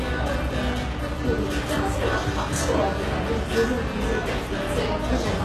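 A short recording of sounds carries plainly audible HE-AAC compression damage from start to finish. The treble still sounds bright but is synthetic: it has a gritty, metallic sheen, and nothing exists above about 12.3 kHz. This is likely the result of spectral band replication, which copies the coded lower bands upward instead of storing the real highs, and the heavy damage fits a very low bitrate around 16 kbps. A plain low-pass or ordinary lossy codec would leave the top dull rather than falsely bright.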